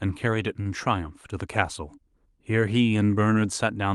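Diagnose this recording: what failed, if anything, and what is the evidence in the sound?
A short stall from a late packet occurs in the network and jitter-buffer stage at 0.61 to 0.68 s. The speech is held for about 40 ms with a slight buzz or dip while the buffer sits empty. Nothing is lost, but playback resumes 40 ms later than before.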